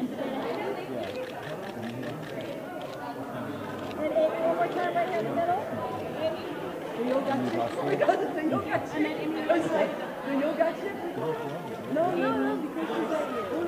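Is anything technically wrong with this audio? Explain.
No, nothing technically wrong can be heard in this audio. Nothing in the sound points to a problem with how it was captured, processed or delivered.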